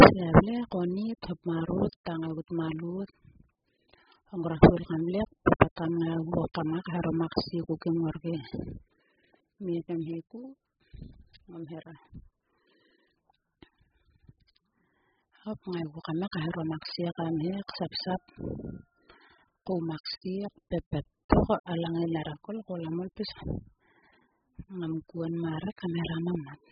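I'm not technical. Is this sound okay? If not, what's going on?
No. AAC compression damage runs through the whole clip: the speech sounds dull and muffled, with nothing above about 5.1 kHz, plus a watery, warbling fizz on hissy sounds. This is likely from squeezing the file very hard, which throws away treble and detail.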